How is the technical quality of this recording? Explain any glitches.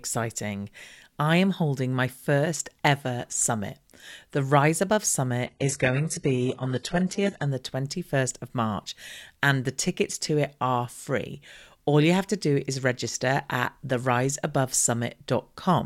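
The recording has one glitch. From 5.47 to 7.47 s, the adaptive stream drops to a lower bitrate. A slower connection forced a much leaner encoding. Treble vanishes above 11.5 kHz and codec artefacts rise, then quality recovers suddenly, without any gap.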